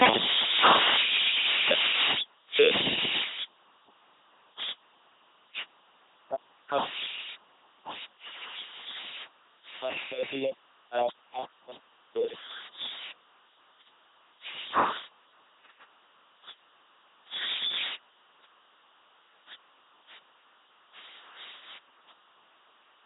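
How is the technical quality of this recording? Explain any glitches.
Quality is poor: the speech has passed through an LPC-10 vocoder for its whole length. Each moment is synthesised as either a pulse-driven buzz or noise through a short vocal-tract filter, so voices sound mechanical and robotic, with wrong-choice buzz or hiss, heavy coding damage consistent with 2.4 kbit/s, and nothing above 3.8 kHz.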